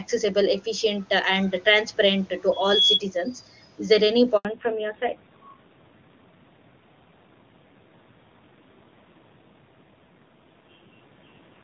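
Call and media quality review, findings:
Loudspeaker feedback squeal, 2.52–3.01 s: mic-to-speaker loop gain exceeds unity at 3.4 kHz. A pure tone swells over about a third of a second to roughly 5 dB above speech.

Handover gap, 4.37–4.45 s: network switch delivered no speech frames for 80 ms. The audio drops abruptly to silence, and that stretch is lost.

Fallback to narrowband, 4.45 s to end: codec renegotiated from HD Voice down to narrowband, consistent with AMR-NB near 7.4 kbit/s. Nothing above 4 kHz remains, and speech turns dull and rough.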